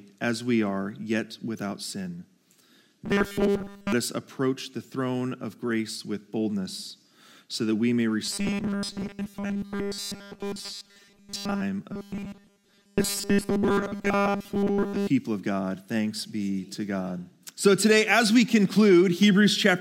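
The audio turns into a robotic sound from repeated short buffers three times: 3.06 to 3.92 s, 8.25 to 11.62 s, and 11.92 to 15.07 s. In each stretch a rigid, metallic buzz near 200 Hz replaces the natural sound, which still roughly follows its original shape. The likely cause is audio arriving too seldom. A 5 ms slice is replayed over and over while most of the real audio in between is skipped.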